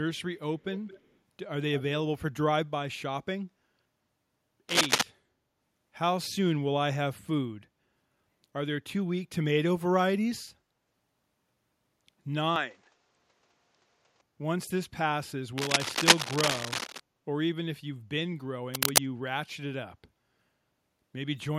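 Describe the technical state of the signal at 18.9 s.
At 18.9 s the speech is overlaid with cable scratch noise, running from 18.74 to 18.98 s: a dense, uneven burst of scratching and rustling that sits slightly louder than the speech itself. The likely cause is a worn cable or connector being moved, its contact resistance fluctuating rapidly.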